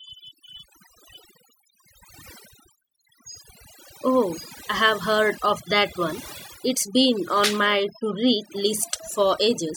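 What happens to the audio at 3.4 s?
At 3.4 s the speech is caught in overdone noise removal, which runs through the whole clip. A noise reduction stage was pushed too hard. Any frequency band sitting near its noise estimate is pulled far down or shut off. Quiet parts of the voice get removed along with the noise. The background drops and breaks up into twinkling, warbling specks.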